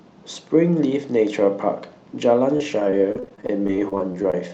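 From 2.57 to 4.34 s, repeated packet loss punches gaps up to 29 ms, each filled by stretching the previous sound, leaving the speech choppy and robotic.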